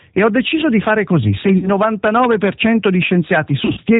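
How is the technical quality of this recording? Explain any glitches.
The recording carries plainly audible low-bitrate codec damage throughout and two short dropouts.

G.729 codec: the whole clip sounds like 8 kbit/s G.729A, with nothing above 4 kHz and a slightly rough, synthetic edge. The speech is rebuilt from a filter, a pitch predictor and a few pulses, so unlike simple band-limiting it adds a rough, synthetic texture.

VoIP packet loss concealed by the speech codec: from 1.58 to 1.69 s, about 40 ms of audio is missing, which fits two lost packets. From 3.65 to 3.80 s, about 80 ms is missing, scattered over 140 ms in runs of up to 40 ms. The decoder stretches its last pitch and filter into a fading buzzy tone or coloured noise, and the speech stays weak after the gap. A clean mute or click would instead cut off sharply.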